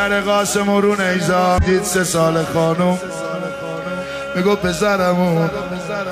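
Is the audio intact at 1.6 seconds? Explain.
No. Damaged data in the compressed stream from 1.58 to 1.64 s makes the decoder misread frames and resync, heard as a chirp, squawk, click or short hole.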